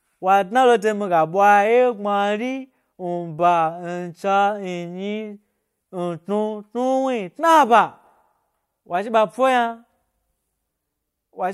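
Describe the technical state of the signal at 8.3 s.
At 8.3 s the speech signal is intact, with no dropout, clipping, glitch or other technical fault audible at that moment.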